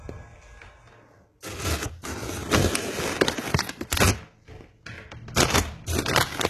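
HE-AAC compression runs throughout this recording of sounds, with plainly audible damage and nothing above 12.3 kHz. The treble sounds gritty and metallic, likely rebuilt by spectral band replication from copied lower bands, which fits a bitrate near 16 kbps.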